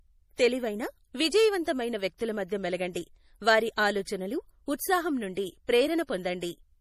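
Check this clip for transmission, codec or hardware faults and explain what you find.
The clip carries one fault, present from start to finish: MP3 compression, plainly audible. The sound has a watery, swirling texture, and s sounds turn metallic and chirpy, with the treble cut off. That fits a low bitrate around 40 kbps, where the encoder likely ran short of bits, discarded the treble and let weak frequency lines flicker on and off between frames. A plain low-pass filter would dull the top end without that shifting, bubbly artefact.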